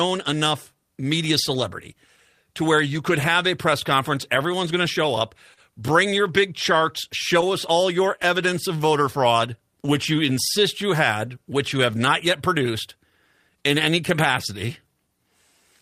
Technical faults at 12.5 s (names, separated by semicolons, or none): clock drift between sender and receiver; repeated timing corrections